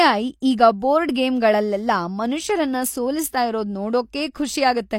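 At 0.40 s a sharp attack in the speech is preceded by about 18 ms of hiss. This is pre-echo: the codec spread its quantisation noise across a whole transform block, filling the quiet before the onset. Unlike an echo, the smear comes before the attack, not after.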